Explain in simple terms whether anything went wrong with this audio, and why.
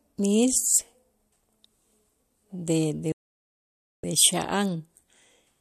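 The speech cuts out at 3.12 seconds and stays silent until 4.04 seconds, a gap of about nine tenths of a second. This is a digital broadcast dropout. The receiver stopped getting usable data, so it muted itself instead of playing garbage. The sound does not crackle or stutter first. It fades out in a few thousandths of a second, so it feels like a sudden cut. Whatever was said in that gap never arrived and cannot be recovered.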